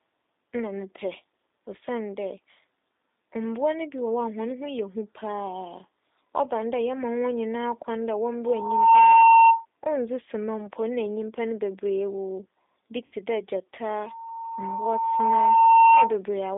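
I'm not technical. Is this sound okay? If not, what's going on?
No. Throughout, the speech passes through a G.729 codec, a phone-call compression method that rebuilds the voice from a rough model. That makes it sound noticeably rough and slightly synthetic, and the narrow band from about 250 Hz to 3.7 kHz gives a muffled telephone quality.

At 13.06 to 13.15 s there is VoIP packet loss concealed by the speech codec. About 60 ms of audio went missing, and the decoder filled the gap by stretching the preceding sound, so you hear a brief stretched patch, a buzzy tone or coloured noise, that fades before speech resumes.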